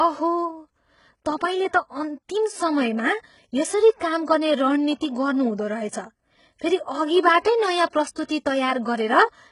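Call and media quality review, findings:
HE-AAC compression, throughout the speech. Treble gritty, metallic; s sounds lispy; nothing above 11 kHz. Likely spectral band replication at a very low bitrate, around 12 kbps: lower bands copied upward under a coarse envelope, so harmonics misalign across the crossover.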